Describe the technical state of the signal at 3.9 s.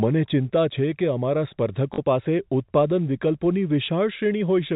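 Right around 3.86 to 3.88 s there's a brief packet loss with the last packet repeated. The receiver filled the 20 ms gap by replaying the previous chunk, which fits a single lost packet, so you get a small blip on top of the narrowband telephone sound.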